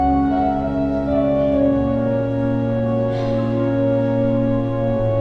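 Nothing stood out as a technical fault on listening to the clip.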